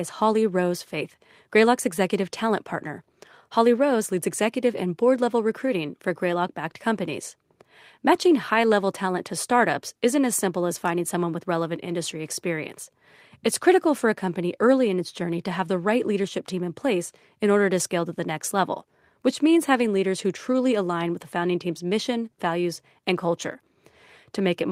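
A speech recording with no technical faults to report. Nothing in it calls for a time or a cause.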